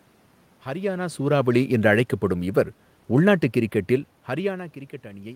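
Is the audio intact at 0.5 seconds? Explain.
Yes, the audio at 0.5 seconds is intact, with only the room's own background noise present beneath the speech.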